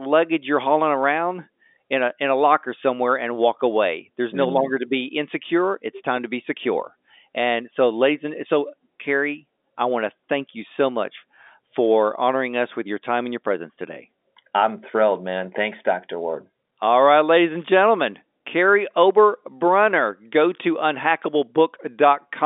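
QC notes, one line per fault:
No faults found; the speech is carried over G.711 mu-law telephone coding at 64 kbps, with the line passing roughly 250 Hz to 3.6 kHz as that path should.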